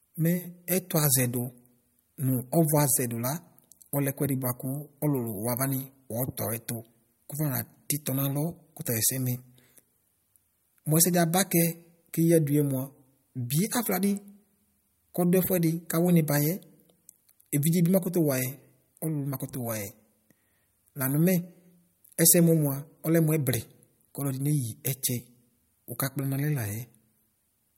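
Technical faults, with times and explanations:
No technical faults are present in this speech clip.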